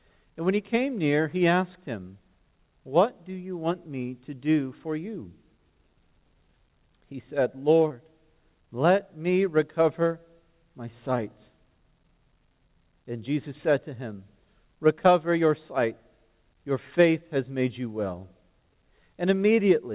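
The clip came through a narrowband call path with nothing above 4 kHz, which fits G.711 telephony. Between 7.88 and 7.92 s there's a short concealed packet loss: about 20 ms never arrived, and the receiver patched it by extending the preceding sound, leaving a brief smear or wobble.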